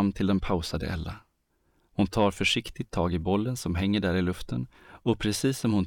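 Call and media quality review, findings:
No audible defects in the speech signal; levels, continuity and timing hold steady throughout, with nothing to attribute to any capture, transport or playback component.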